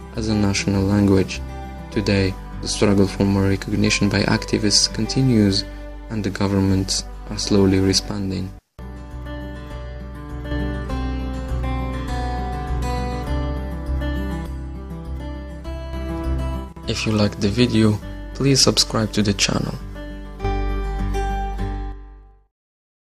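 Three abrupt level drops of about 6 dB interrupt the sound, from 8.11 to 10.51 s, 14.46 to 15.93 s, and 21.92 s to the end. The likely cause is one channel dropping out: the mono sum loses half its shared content, and one-sided material vanishes.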